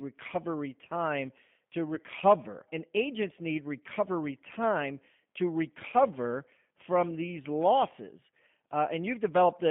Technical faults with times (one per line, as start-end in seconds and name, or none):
0.00-9.71 G.729 codec
1.95-2.00 VoIP packet loss concealed by the speech codec